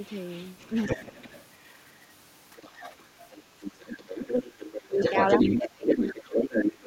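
A speech clip with two echo-related faults. The other side's voice is leaking through from 0.05 to 1.82 s, faint at about 20 dB under the talker. From 2.56 to 6.72 s it returns at roughly the talker's own level. The likely cause is the talker's loudspeaker feeding the microphone, with the echo canceller failing to remove that sound. Speech is also suppressed in double talk. The talker dips slightly from 0.73 to 1.01 s, by about 10 dB from 2.98 to 3.07 s, and slightly again from 3.60 to 3.65 s. From 4.77 to 5.01 s it drops by about 30 dB. From 5.55 to 6.86 s deep cuts remove around a second of speech in total. These dips fall where both sides overlap. The likely cause is the canceller turning down everything when it cannot separate the talker from the echo.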